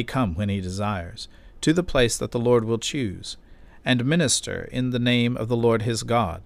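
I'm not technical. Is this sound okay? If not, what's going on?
Yes, this sound is okay, and nothing in it needs fixing.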